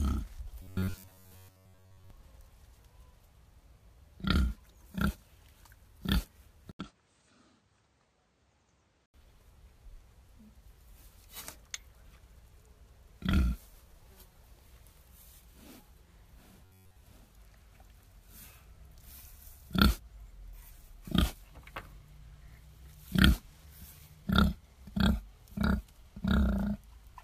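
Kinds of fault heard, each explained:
Robotic sound from repeated short buffers: at 0.62 to 2.10 s and again at 16.65 to 16.96 s the sound turns into a stiff 93.8 Hz buzz, likely because late audio was covered by looping the last roughly 10.7 ms chunk. The first stretch is mostly repeats, the second entirely.
Input switched to a poorer device: at 6.71 s there's a short 80 ms gap, then until 9.14 s the sound comes through what is likely a lesser input, with its own tone, a level around 5 dB lower and a new noise floor well below the signal.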